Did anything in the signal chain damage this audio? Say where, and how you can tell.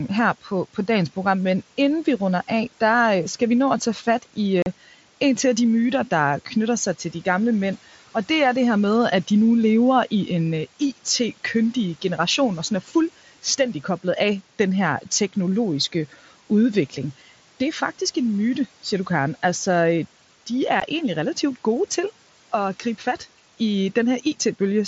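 Yes. On the Bluetooth link, unconcealed Bluetooth headset packet loss leaves two hard-edged gaps: at 4.62 s, about 37.5 ms between "at tage fat i" and "en til af de", and at 20.80 s, 15 ms before "egentlig relativt gode til". Each is a blank vertical stripe on a spectrogram, consistent with a few lost mSBC frames replaced rather than concealed.

In call processing, speech was cut by the noise suppressor from 12.86 to 12.95 s. It mistook a stretch of speech for noise and pulled it down by up to about 9 dB over roughly 100 ms. The waveform envelope sags there, and the spectrogram dims toward the room-noise floor.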